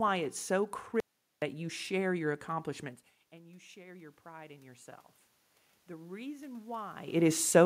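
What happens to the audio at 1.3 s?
At 1.3 s you're inside an audio dropout to silence running from 1.00 to 1.42 s. Right after "it's so" the sound cuts to dead silence, no room tone at all, and it picks up again on "you share your accomplishments". That's about 420 ms gone. It's most likely the input dropping out while the recorder kept writing silence.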